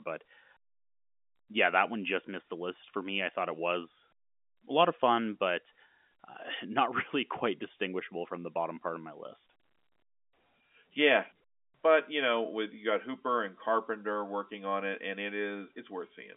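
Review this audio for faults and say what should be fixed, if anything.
Nothing stood out on listening that needs fixing; the speech comes through as ordinary telephone-band audio, with nothing above about 3.8 kHz, as expected of G.711 telephone coding.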